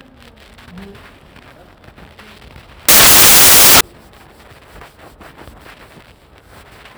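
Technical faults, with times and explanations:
2.89–3.81 s, samples built from the wrong bytes: the low, fast-changing bits get read as the big part of each value, so the sound turns into loud hiss.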